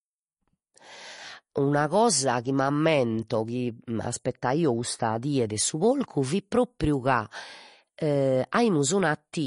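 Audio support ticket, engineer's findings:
Whole clip: watery, swirly speech, sibilants chirpy and metallic, consonant attacks smeared, nothing above 10.5 kHz. Likely MP3 compression. Encoder starved of bits, so it chops the top at a fixed cutoff and drops weak frequency lines that blink on and off frame to frame. Damage plainly audible, which fits a low bitrate, somewhere around 40 kbps.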